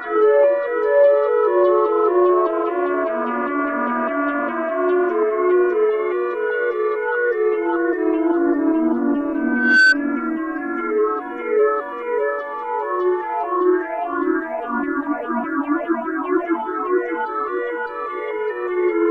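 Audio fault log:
9.34–9.95 s, loudspeaker feedback squeal: a microphone picked up the loudspeaker it was feeding, and at 1.5 kHz the gain around that loop rose above one, so each pass through the system reinforced the one before. What results is a single steady tone at 1.5 kHz that swells over roughly half a second until it stands about 10 dB above the surrounding sound, then cuts out at 9.95 s.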